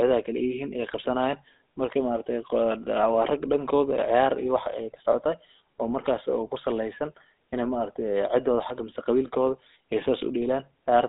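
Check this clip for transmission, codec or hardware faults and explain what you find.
There is one fault, and it runs through the whole clip: the speech has passed through a GSM full-rate codec. Nothing is heard above 3.8 kHz, and the band sits roughly between 250 Hz and 3.7 kHz, which fits a 13 kbps GSM full-rate stream. The codec models the vocal tract and drives it with a sparse pulse excitation, so the voice comes out with a plainly audible buzzy, gravelly roughness and a narrow telephone-like tone.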